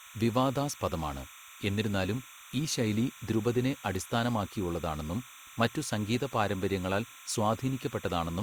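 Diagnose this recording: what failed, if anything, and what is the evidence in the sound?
Timecode bleed runs throughout: a steady chirping warble near 1 and 2 kHz, roughly 20 dB under the speech, from 30 fps linear timecode leaking through analogue wiring.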